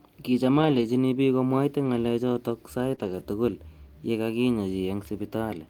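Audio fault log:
0.57–0.83 s, 1.85 s, 2.83–2.93 s and 2.99–3.21 s: lost packet rebuilt from error correction. The speech plays without any gap but turns rougher and noisier, because the decoder played the low-bitrate copies carried in the following packets. Unlike concealment, nothing is smeared or extrapolated.
2.95–2.99 s: short concealed packet loss. A brief smear or wobble appears where about 20 ms never arrived in time. The receiver stretched the preceding sound to cover the hole and blended back, rather than playing a real copy of the missing audio.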